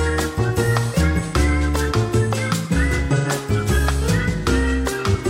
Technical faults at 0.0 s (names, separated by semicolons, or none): none